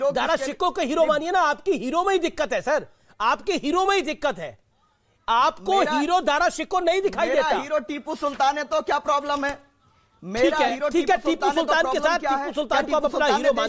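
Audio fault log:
Nothing stood out on listening; no fault was heard anywhere in the clip.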